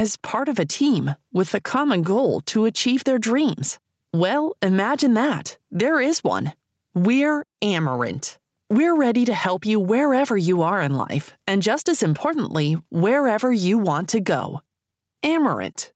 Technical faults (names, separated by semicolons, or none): none